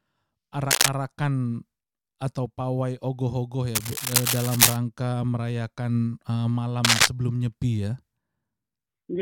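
Cable scratch noise cuts across the sound three times: 0.71 to 0.89 s, 3.75 to 4.76 s, and 6.84 to 7.08 s. Each burst is dense, uneven rustling, somewhat louder than the sound beneath. The likely cause is a worn cable or connector being moved.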